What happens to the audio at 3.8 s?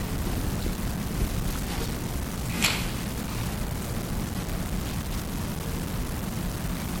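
At 3.8 s you're hearing the same grainy, gritty distortion that runs through the whole clip. The grit tracks the sound itself and sits only about 10 dB below it. That points to low bit depth without dither: likely rounding to around 5 bits with no noise added to smooth the steps.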